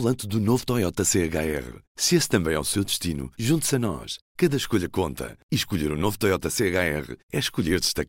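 Nothing in this recording stands out as a technical fault, so there's no moment along the way that calls for a closer look.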